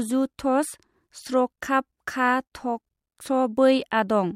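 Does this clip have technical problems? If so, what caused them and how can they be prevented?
No, nothing in this speech clip points to a technical fault, so there's no cause to track down and nothing here that needs preventing.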